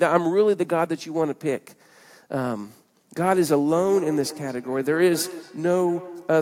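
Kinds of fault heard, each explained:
Feedback echo between two devices: From 3.76 s to the end of the speech, each word returns again at a steady spacing of about a fifth of a second. Two devices in the same room are on the call, and one plays back what the other's microphone sent. That microphone hears it again. Neither echo canceller removes sound from the other device's speaker. The repeats sound thinner and more ringing, peaking at about 16 dB below the speech.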